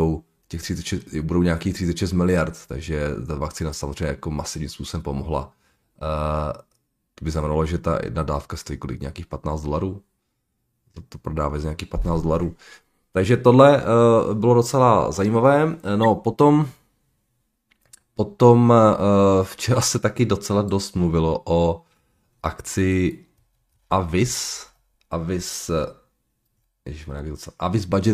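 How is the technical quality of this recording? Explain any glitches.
Two brief glitches break into the speech. At 16.03 to 16.06 s a loud squeaky burst cuts in; at 21.92 s a much fainter blip. Both are a corrupt frame decoded: damaged compressed data, a few frames at most, was played anyway, scattering energy across wrong frequencies.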